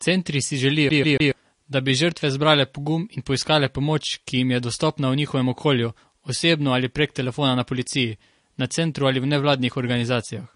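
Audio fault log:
Throughout: likely MP3 compression, with swirly, watery artefacts and nothing above about 10.6 kHz, which fits a starved bitrate around 40 kbps.
0.89 to 1.32 s: CD stuck on one turn, with a 141 ms chunk stuttering three times with little mutes at each jump, right before "da bi žrtve zbrale".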